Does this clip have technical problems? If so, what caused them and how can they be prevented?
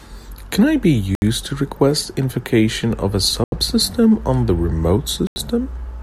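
Yes. The speech drops to silence at 1.15 s (70 ms), 3.44 s (82 ms) and 5.27 s (89 ms), then resumes. These are likely Bluetooth stalls, where radio interference delayed packets until the headphones' buffer ran empty. Keeping the phone close to the headphones with a clear line of sight, away from busy Wi-Fi and other 2.4 GHz sources, prevents them.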